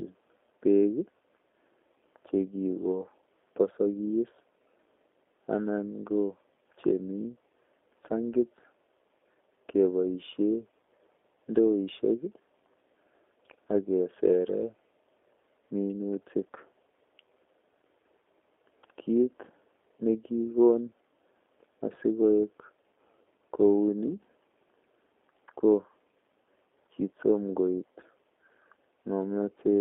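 Speech, carrying G.729 codec damage from start to finish. The band stops near 300 Hz and 3.5 kHz, so it sounds thin and boxed. Each 10 ms frame is rebuilt from a filter, pitch and sparse pulses, giving a plainly rough, synthetic texture that fits an 8 kbit/s G.729A stream.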